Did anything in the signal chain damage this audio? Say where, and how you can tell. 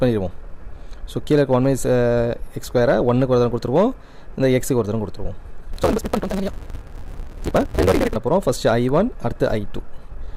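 Yes: a block size mismatch (truncated) at the buffer, 5.73 to 8.16 s. Discarded block ends leave a 188 Hz buzz and 1.88x speed, fitting 256-sample reads, with evenly spaced vertical seams on the spectrogram.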